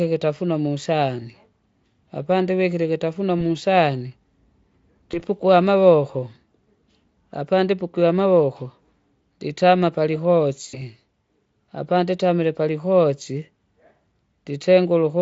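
Dropped VoIP packets in this speech recording were covered by the codec's packet loss concealment, which extrapolated the missing audio from its last pitch and filter at 3.39–3.42 s, just after "apandivikile ikitafunwa", at 5.11–5.22 s and at 10.69–10.80 s. Each gap briefly becomes a fading buzzy tone or coloured noise. The first two fit a single 20 ms frame and the third about 40 ms, all through a Speex stream whose own coding colour is faint.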